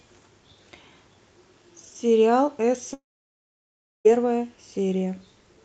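At 2.93 s the speech breaks off. The last sound carries on briefly as a fading buzz, then gives way to silence for about a second. Speech resumes at 4.07 s, picking up later than where it stopped. About 1.1 s is simply gone. This is most likely a long network dropout. No packets arrived, so the receiver stretched the final sound, then went quiet. Throughout, the call codec's band limit near 8 kHz is audible, consistent with Opus at about 40 kbps.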